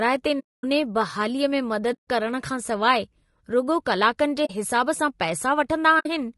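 From start to finish the speech is rough and grainy, with noise filling the gaps between harmonics and a thin, synthetic-sounding top band. This is likely low-delay AAC compression (AAC-ELD) at 32 kbps, whose short frames smear pitch structure. On a spectrogram, the harmonic lines look blurred and the upper band looks patchy.

AAC frame loss with muting then cuts four soft-edged holes. The first runs from 0.39 to 0.64 s (250 ms), just before "बहालीअ में". The second runs from 1.93 to 2.08 s (150 ms), between "बहालीअ में" and "करण खां सवाइ रुॻो". The third runs from 4.45 to 4.51 s, just before "हिसाबु सां", and the fourth from 5.99 to 6.06 s. Their lengths fit whole 20 ms frames being lost and zeroed. The waveform tapers to flat silence, and the spectrogram shows blank vertical bands with faded edges.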